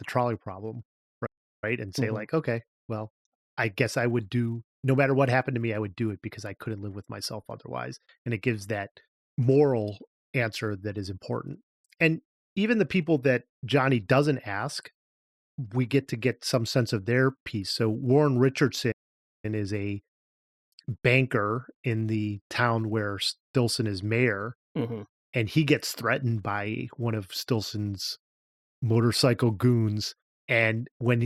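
At 1.26 s the speech cuts to silence for 0.36 s, and at 18.91 s it does so again for 0.52 s, with playback resuming after each gap. Both are playback stalls: the output simply stops mid-flow. The likely cause is the player briefly running out of buffered data or its output thread being blocked, leaving nothing to send to the output until it recovers.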